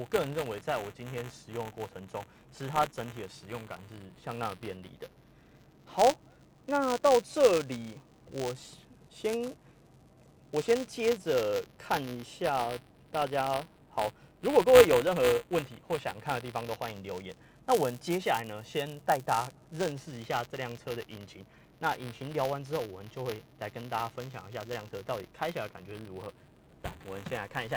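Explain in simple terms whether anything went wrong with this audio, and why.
Buffer tearing runs through the whole clip: a steady robotic buzz at 188 Hz, which fits a 256-sample buffer, where the software and hardware slipped, splicing in tiny scraps of audio about 20 ms old.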